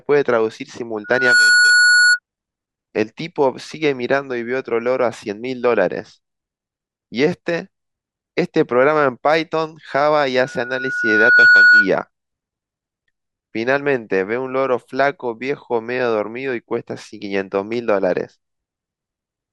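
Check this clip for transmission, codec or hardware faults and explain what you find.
Two bursts of loudspeaker feedback squeal interrupt the speech. From 1.04 to 2.19 s and again from 10.39 to 11.91 s, a steady 1.5 kHz tone swells over the speech. The first rises within a fraction of a second to roughly 5 dB above it, and the second climbs over about a second to roughly 10 dB above it. A microphone is hearing its own loudspeaker, and at 1.5 kHz the loop gain passes one, so that tone keeps reinforcing itself.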